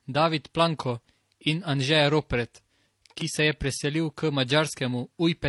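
Transcoding between lossy codecs runs throughout this speech clip: the sound carries two overlapping sets of compression artefacts heard together over a dull, band-limited top. That likely comes from low-rate MP3 followed by HE-AAC re-encoding the earlier damage.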